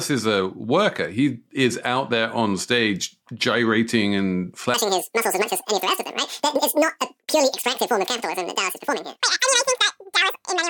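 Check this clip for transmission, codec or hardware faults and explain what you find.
One fault is present, a section at the wrong speed. From 4.74 s, right after "on stage gyrating and", to the end, the speech runs at twice its recorded speed and sounds roughly ten semitones higher, likely from playback against the wrong clock. Tempo and pitch rise together, which sets it apart from a pure pitch shift.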